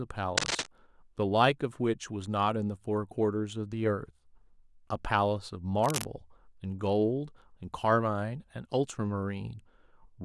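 Speech marred by cable scratch noise: a worn cable or connector likely shifting adds dense, uneven crackling from 0.37 to 0.68 s, roughly as loud as the speech, and more faintly from 5.79 to 6.05 s.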